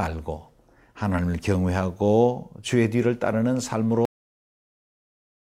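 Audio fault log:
4.05–5.40 s, cut-off end: the final stretch of audio was never written out or played, so the stream ends early and everything after 4.05 s is missing. The speech breaks off partway through a sound rather than finishing or fading, and the level falls straight to digital silence with no decay or room tail. The abrupt stop, followed by over a second of dead air to the end of the clip, is what marks it as truncated.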